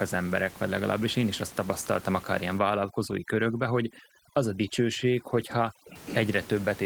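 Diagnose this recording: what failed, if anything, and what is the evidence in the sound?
Overdone noise removal in the call-processing stage, 2.59 s to 5.96 s, right after "azt tapasztaltam akár ilyen". The room noise, about 20 dB below the speech, collapses to near silence with twinkling specks, and quiet parts of the speech go with it as bands near the noise estimate are cut.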